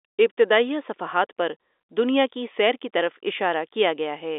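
No faults can be heard in this telephone-band speech.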